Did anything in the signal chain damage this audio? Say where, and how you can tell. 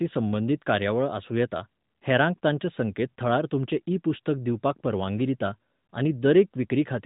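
No, nothing in the chain damaged this audio.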